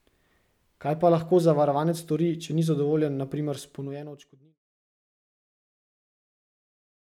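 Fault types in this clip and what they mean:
No technical faults present.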